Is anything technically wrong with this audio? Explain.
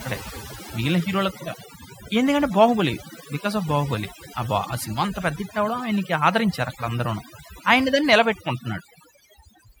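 Yes. Throughout the speech there is overdone noise removal. A noise reduction process was pushed too hard, so any frequency band that dropped near its noise estimate was cut deeply or switched off, taking the quieter parts of the speech along with the noise. The result is a background pulled down but sprinkled with twinkling, chirpy specks.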